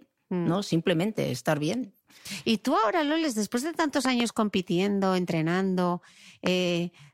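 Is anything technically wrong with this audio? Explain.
Yes, there are two loud pops. The first, from 4.05 to 4.22 s between "después de tantos" and "compitiendo entrenando", is a quick double pop. The second, 6.47 to 6.49 s after "compitiendo entrenando", is one sharper hit. Both jump well above the speech, which carries on underneath. They're likely voltage spikes from a plug, switch or static, shaped into thumps by the circuitry downstream.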